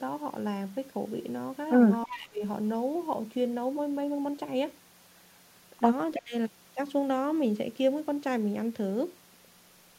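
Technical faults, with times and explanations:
2.05–2.42 s and 6.15–6.34 s, speech suppressed in double talk: the voice suddenly sinks, falling by about 25 dB in the first stretch and about 30 dB in the second, then returns once each gap passes. These dips were likely caused by both ends talking at once. The echo canceller could not separate this talker from the returning loudspeaker sound, so it pulled everything down together for those fractions of a second.
2.1–2.19 s, echo leak: a faint, delayed copy of the voice slips in about 20 dB below the main speech, trailing the original by 322 ms, and sits inside the first dip. It is likely residual echo from a loudspeaker at one end. The microphone there picked up the played-back voice, and that device's canceller failed to remove all of it, so a brief scrap was sent back down the line.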